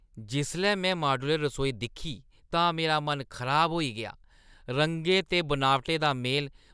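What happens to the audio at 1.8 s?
Nothing goes wrong at 1.8 s: the speech runs through that moment intact, with no dropout, click, distortion or other fault.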